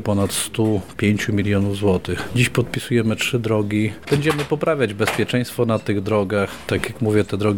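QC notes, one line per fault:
No faults were heard anywhere in the audio. Nothing in it calls for a QC note.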